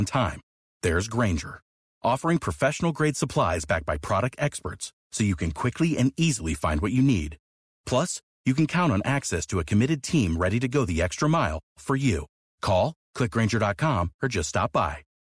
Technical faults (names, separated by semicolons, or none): none